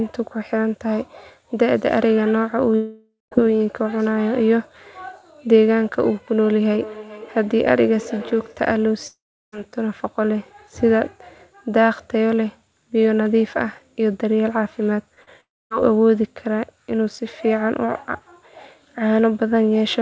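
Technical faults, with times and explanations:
2.76–3.33 s, 9.07–9.54 s and 15.41–15.72 s: long network dropout. The sound smears into a fading buzz or hiss, then goes silent, for about 0.17 s, 0.35 s and 0.25 s respectively. Audio resumes further on. The lost stretches, roughly 0.56 s, 0.46 s and 0.3 s, are likely network gaps the receiver could only partly paper over.
6.53–8.65 s: feedback echo between two devices. Speech returns about every 0.4 s, thinner and ringier each pass. The loudest repeat sits about 16 dB below the speech. A second device in the room replays the call, and its output reaches the other microphone.
15.14–15.19 s and 15.23–15.29 s: short concealed packet loss. Two brief smears, 20 ms and 40 ms long, come just before the third dropout. The decoder missed those slices and stretched the preceding sound to fill them before blending back.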